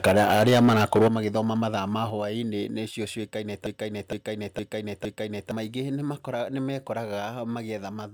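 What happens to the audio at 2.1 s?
At 2.1 s, just after "magĩthoma mathaa ma", the level of the speech and its background drops suddenly by about 4 dB in a single step. This is likely a microphone volume step-down, where the call software lowered the device's input volume at once.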